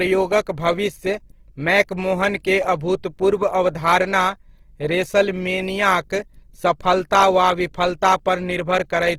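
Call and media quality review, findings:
Opus compression across the whole speech clip, start to end. Grainy, rough texture on the voice; harmonics turning noisy rather than clean tonal. Bandwidth stays wide, content up to about 20.2 kHz, so no muffling. Likely the Opus encoder in CELT music mode running short of bits, which fits a low rate around 16 kbps. Starved bands get filled with folded or noise content instead of being left empty, hence the grit rather than swirl.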